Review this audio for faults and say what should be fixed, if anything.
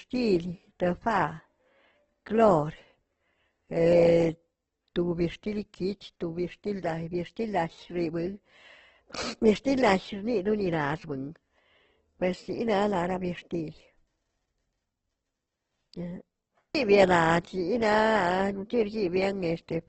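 The whole clip carries what's most likely Opus compression, and it's pretty heavy-handed. There's nothing above about 8.2 kHz, so the speech sits in a wideband box and sounds dulled at the top. Instead of swirly holes, the tone has gone rough and grainy, the band energy held in place but filled with noise and folded copies of lower bands. That texture points to the music-style CELT mode running at a starved rate, something like 12 kbps. To prevent it, export from the original source, or give Opus a far higher bitrate so it keeps full bandwidth.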